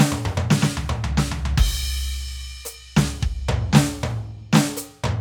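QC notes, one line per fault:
No faults found in this music clip. Nothing here needs flagging.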